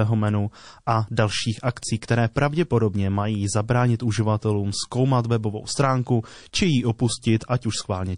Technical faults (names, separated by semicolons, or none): MP3 compression; pre-echo